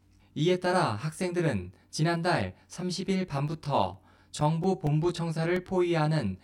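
The whole clip has channel delay (comb filtering). One side lags the other by roughly 20 ms, and summed to mono the shared parts cancel at evenly spaced frequencies starting around 30 Hz. That leaves the speech sounding rough or slightly doubled throughout.

From 3.25 s to 5.80 s you get CD scratch ticks, about a dozen of them at a steady rate of roughly five a second. A blemish on the disc wrecks more data each revolution than error correction can rebuild, so the player patches or mutes short gaps of a few milliseconds, heard as regular small clicks.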